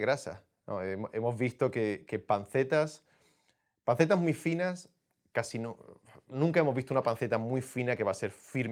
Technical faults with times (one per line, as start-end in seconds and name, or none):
none